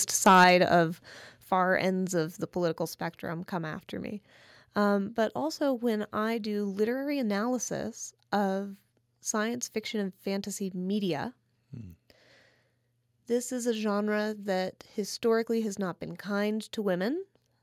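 Right at the start, from 0.26 to 0.76 s, there's microphone overload: the loudest speech peaks break up with a harsh, crackly edge, running about 5 dB past the converter's limit, with roughly one sample in twenty flattened. The likely cause is input gain set too hot for the converter. Midway through that stretch, at 0.44 s, the microphone volume steps down by about 4 dB, and at 1.44 s it drops again by about 5 dB. Both times the voice and background fall together in one sudden notch, most likely the call software cutting the input level after hearing those clipped peaks.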